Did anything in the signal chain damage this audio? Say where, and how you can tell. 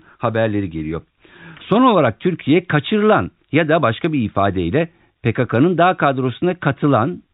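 No, the speech carries the ordinary character of G.711 A-law telephone coding at 64 kbps, with nothing above 4 kHz and only a faint level-following quantisation hiss, which is how an intact telephone path sounds.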